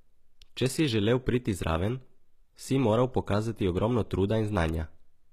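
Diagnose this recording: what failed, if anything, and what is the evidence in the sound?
The codec stage is at fault, across the whole recording. The upper spectrum of the speech sounds synthetic: s sounds come out gritty and lispy, with a metallic sheen rather than clean hiss. The likely cause is HE-AAC compression at a low bitrate, around 20 kbps to judge by the damage. At that rate the encoder codes only the lower band and fabricates the treble by copying lower bands upward under a coarse envelope, so the rebuilt harmonics no longer align with the real ones.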